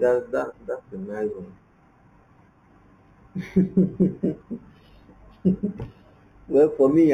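From start to finish, this speech shows imaging from linear upsampling. The rate was raised by joining samples with straight lines. That is a poor low-pass filter. Content above about 4 kHz points to an 8 kHz source raised to 48 kHz. The top of the band sounds dulled. A faint mirror of the spectrum sits between 4 and 8 kHz, roughly 40 dB below the signal. It adds a light metallic shimmer on sibilants.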